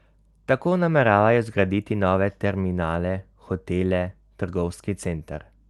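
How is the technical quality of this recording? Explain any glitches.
No glitches or other faults can be heard anywhere in this speech recording. It has passed through a WebRTC call path with its normal codec character, and the top end is limited to around 12 kHz, which is expected for that kind of connection.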